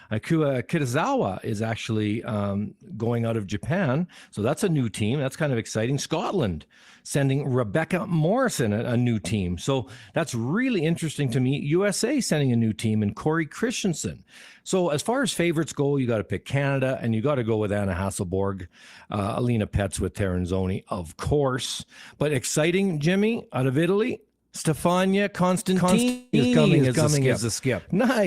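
At 25.75 s a doubled audio track begins and runs to the end: a second full-band copy, at about the same level, trails the original by roughly 400 ms, likely from a slower capture path. It cuts in abruptly, and the spectrogram shows every pattern repeated, time-shifted, without decay. At 26.09 s a long network dropout lasting about a quarter second follows: the receiver extends the last sound as a fading buzz until 26.35 s, and the waveform shows a smooth decaying stretch where the real audio was lost.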